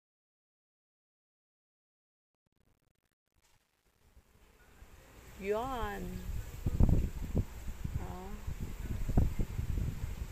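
From the start to 5.30 s, the fade-in carries truncation distortion on a fade. The gain stage behind it appears to keep too few bits, consistent with roughly 10-bit resolution, and applies no dither, so the low-level waveform collapses into a handful of square steps. Between 0.0 and 4.61 s the quiet audio sounds gritty, before the rising level clears the coarse steps and the fade completes at 5.30 s.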